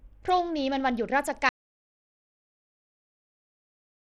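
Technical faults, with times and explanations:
throughout: Bluetooth SBC compression. A starved bit allocation, likely from an SBC link at about 80 kbps, leaves nothing above 13 kHz and coarse, gritty grain on the speech.
1.49 s to the end: audio dropout to silence. The input was likely lost while recording carried on writing silence, so the speech cuts off into dead silence with no room tone.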